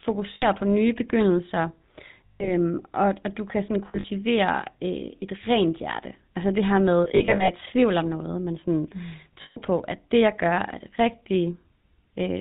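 The whole recording has passed through the GSM full-rate codec at 13 kbps. This early coder models the vocal tract and drives it with a pulse train that keeps only every third excitation sample, and it drops everything above 4 kHz, so the speech sounds plainly buzzy and gravelly, with a dull, band-limited top.

Lost GSM frames interrupt it five times. The decoder fills each gap by repeating the last good frame, which produces a rough, metallic ring in place of the missing sound. At 0.34 s an 80 ms gap rings briefly. At 2.26 s, after "på nye begyndelser" and before "og og du kan", 140 ms is held. At 3.88 s, after "og du kan sådan", 120 ms of losses are scattered over 160 ms, the longest run roughly 70 ms. At 7.04 s, between "det her med" and "i tvivl om noget", 220 ms spread across 440 ms rings in short bursts. At 9.42 s a further 140 ms is held.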